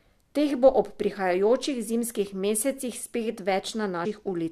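At 4.04 s, compressed frames are skipped: around five 23.2 ms frames go missing, so the speech jumps ahead roughly a tenth of a second.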